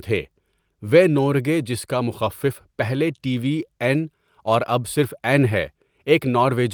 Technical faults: none

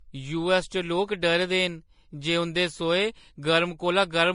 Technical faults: transcoding between lossy codecs

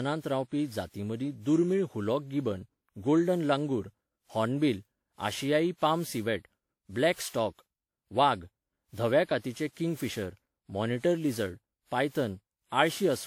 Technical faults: generation loss

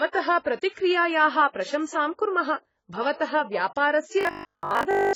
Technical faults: AAC compression; robotic sound from repeated short buffers

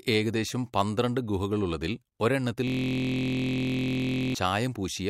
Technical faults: system hang loop

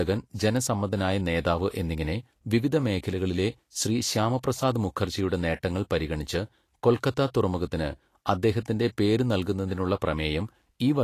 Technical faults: Vorbis compression

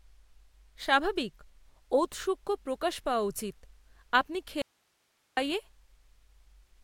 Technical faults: audio dropout to a faint residue

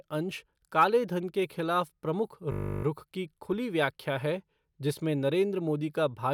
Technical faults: system hang loop

